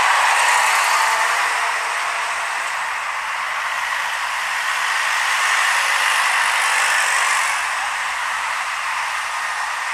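The audio has no audible technical faults at any point.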